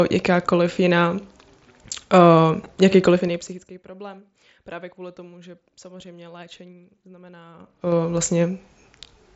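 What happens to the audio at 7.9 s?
A ticking, zipping texture rides on the speech from 7.52 to 7.96 s. This is zipper noise. The level shifts by about 25 dB in unsmoothed 3 dB steps, around twenty a second, and each abrupt jump leaves a small click.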